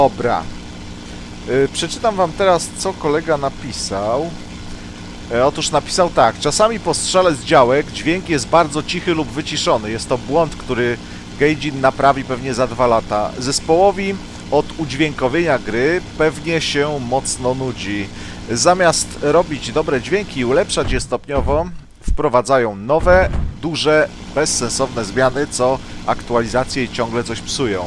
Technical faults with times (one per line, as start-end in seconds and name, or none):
none